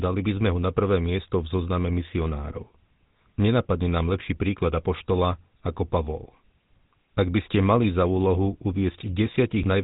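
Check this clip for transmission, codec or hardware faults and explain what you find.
The speech carries one codec fault. Throughout, GSM full-rate codec damage: a vocal-tract model driven by sparse, regularly spaced pulses gives a plainly buzzy, gravelly roughness, with nothing above about 3.9 kHz. That fits 13 kbps. Plain band-limiting would dull the sound without adding this grit.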